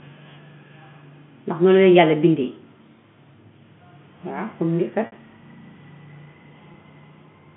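At 5.06 s the stream loses about 60 ms of data, which fits three 20 ms packets, and again at 6.72 to 6.74 s it loses about 20 ms. This is packet loss with pitch repetition: the receiver repeats the last pitch period to bridge each gap, so the speech briefly holds as a buzzy, sustained tone that fades out over the longer gap before the speech resumes, all within the narrow telephone band of the G.711 line.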